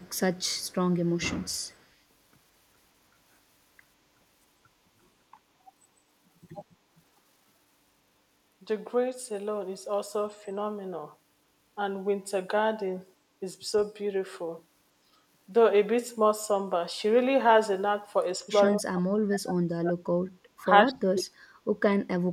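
In the opening seconds, at 0.0 to 0.2, 0.37 to 0.74, 0.92 to 1.2 and 1.47 to 1.87 s, there is echo leak: a faint copy of the speech trails 153 ms behind, around 35 dB down. The likely cause is a loudspeaker echo canceller passing residue. On a spectrogram it appears as pale, time-shifted ghosts of each speech band. Another brief scrap of leaked echo appears at 18.69 to 18.73 s.

From 18.68 to 20.01 s, and again at 20.86 to 21.34 s, there is speech suppressed in double talk. The speech dips sharply, by up to around 40 dB. This is likely because the canceller attenuated the talker while the far side spoke. The waveform shows abrupt envelope holes.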